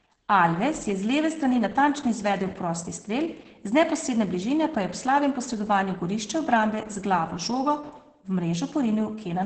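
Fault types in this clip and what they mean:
Opus voice compression: The speech sounds muffled, hoarse and faintly robotic all the way through, with nothing above about 8.5 kHz. This fits low-bitrate Opus, around 10 kbps, using its SILK linear-prediction coder in wideband mode, which cuts off the high band and codes the excitation coarsely.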